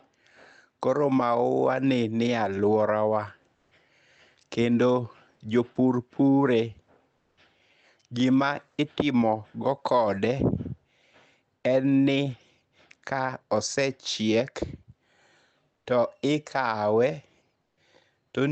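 Comfort noise in place of the background occurs in this speech clip at 15.73 to 15.85 s and 17.61 to 17.77 s: in pauses the quiet background, about 53 dB below the loudest passages, turns into steady, featureless hiss about 3 dB lower, likely from Opus discontinuous transmission halting audio and the receiver synthesising filler noise, within a call path whose audio stops around 8 kHz.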